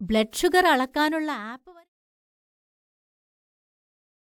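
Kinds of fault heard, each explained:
Nothing stood out on listening; the level simply eases away early in the clip, as an editor's fade would.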